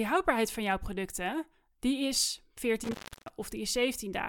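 At about 2.84 s the speech drops out in a way that sounds like an intermittent contact: a loose cable or plug briefly losing its connection. There's a crackle as it breaks, then roughly 320 ms where the signal is simply gone and only a faint hiss remains, and another crackle as the contact catches again. The whole disturbance, edges included, is over by about 3.31 s.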